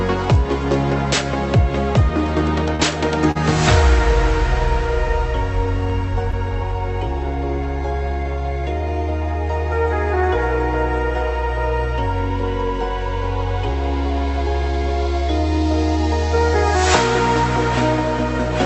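At 2.75 to 2.81 s, 3.31 to 3.37 s and 6.31 to 6.35 s there is a short stall from a late packet. Each time the jitter buffer ran dry and the receiver stretched the last sound for about 40, 40 and 16 ms before resuming at the same point. It sounds like a brief held smear with a faint buzz. Unlike a lost packet, nothing is skipped. The audio only runs late. The call codec's band ends near 8 kHz.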